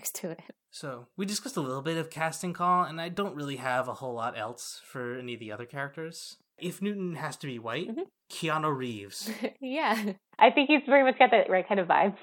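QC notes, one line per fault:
10.40–12.22 s, input switched to a poorer device: the sound abruptly turns dull and boxy, with nothing above 3.9 kHz, a level shift of roughly 5 dB and a new faint noise floor, with no gap. Likely a change of microphone, because tone, level and noise all change together, which a filter alone would not do.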